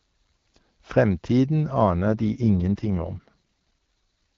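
A speech clip carried over an AMR wideband (HD Voice) call path. From 2.07 s to 4.36 s an AMR rate drop sets in: the voice turns rougher, raspier and more synthetic, which points to the codec stepping down from about 12.65 to 6.6 kbit/s, likely as the link weakened. There is no gap and the band doesn't narrow, so a spectrogram keeps the same upper edge while harmonics smear and fine detail turns noisy; the waveform stays continuous.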